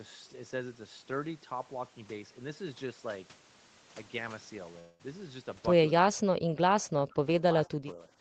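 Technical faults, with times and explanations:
4.79 to 5.01 s, long network dropout. For about 0.2 s no new audio gets through. The receiver carries the last sound forward as a fading buzz rather than going quiet, and the gap fills for its whole length. When sound returns, that 200 ms of the talker is gone, not delayed. A stretch of packets that likely never arrived is the cause.
6.11 to 7.26 s and 7.67 to 8.11 s, speech suppressed in double talk. In the first stretch the talker dips hard, by roughly 40 dB at worst, over about a second in total. In the second the dip is shallower, around 15 dB, over roughly 0.3 s. The likely cause is an echo canceller that hears both sides at once and turns everything down.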